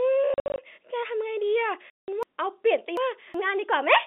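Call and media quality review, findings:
Packet loss filled with silence, 0.34 to 0.58 s. Several short dropouts scattered over 240 ms, about 160 ms silent in total, longest hole 60 ms. Hard edges. Probable component: network path into the receiver.

Packet loss filled with silence, 1.90 to 2.08 s. One solid 180 ms hole with hard edges. Same mechanism: lost packets replaced by silence, no concealment. Hole lengths step in multiples of 20 ms, which fits 20 ms packets.

Chunks out of order, 2.23 to 3.34 s. Jumbled passage with three hard joins. Chunks of about 0.37 s; one plays two chunk slots late. Nothing missing, just misordered. Probable component: jitter buffer or recording writer releasing a delayed chunk after its successors. G.711 line band, 250 Hz to 3.7 kHz, audible throughout.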